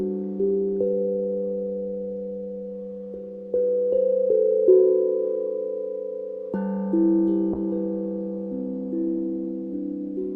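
From 7.54 s to the end, a call bitrate drop makes the encoder code coarsely, consistent with a fall from about 64 to 28 kbps. The top band shrinks from 20 kHz to 12 kHz, and unlike a simple low-pass filter, the audio also turns rough and watery, with no gaps.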